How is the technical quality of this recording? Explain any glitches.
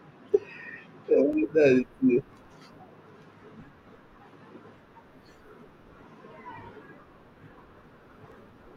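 The recording has one recurring fault: clock drift buffer slips, from 0.33 s to 8.32 s. A click repeats about once per second, roughly ten times in all, whenever speech is present. The likely cause is two devices running on slightly different clocks, several hundred parts per million apart. The buffer between them drifts until a few tens of samples are dropped or repeated at each slip.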